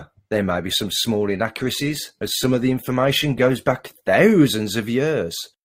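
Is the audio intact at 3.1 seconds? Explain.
No, not quite. At 3.1 s you're still inside the opening stretch, from 0.0 to 4.15 s, where this speech sits on an adaptive stream starting at a low bitrate. The player picks a lean version to start fast, then switches once it trusts the connection. Until then the top end is thin and papery, with smeary codec artefacts, which fits something like 16 kbit/s Opus. Right at 4.15 s it jumps, gaplessly, to a fuller sound around 64 kbit/s.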